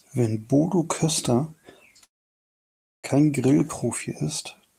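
At 2.03 s the speech stops abruptly. The last sound carries on briefly as a fading buzz, then drops to silence for nearly a second. At 3.06 s it resumes exactly where it broke off, with nothing skipped. This is a call audio freeze, likely caused by packets being held up in transit until the jitter buffer ran dry. Waiting for them inserted about 1.0 s of filler and pushed everything after it later by that amount.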